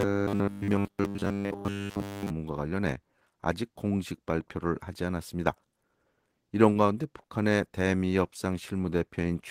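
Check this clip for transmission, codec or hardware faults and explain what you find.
Three kinds of transmission fault can be heard, all in the network and playback path rather than in recording hardware.

From 0.01 to 2.31 s there is robotic sound from repeated short buffers. The audio takes on a rigid, metallic buzz at 100 Hz that stays fixed regardless of what the sound is doing. The likely cause is audio arriving too seldom, so the player keeps looping the last fragment, about 10 ms long, which fits that 100 Hz buzz. Essentially all of this stretch is repeated material. Unlike packet-loss concealment, the buzz persists for seconds rather than flickering past.

Short concealed packet loss occurs at 6.73 to 6.77 s and again at 7.21 to 7.26 s. Each time about 20 ms of audio never arrived, and the receiver bridged the hole with roughly 20 ms of synthesized continuation before blending back in. 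Each is heard as a brief smear or wobble. What separates these from a stall is that real audio is missing: whatever fell in those gaps is gone.

A short stall from a late packet follows at 7.28 to 7.31 s. A packet came about 18 ms late, the jitter buffer emptied, and the receiver stretched the last sound for 18 ms before resuming exactly where it left off. Nothing is lost, but a sound is held slightly too long, with a faint dip or buzz. That held-over, nothing-skipped quality distinguishes it from the concealed losses just before it.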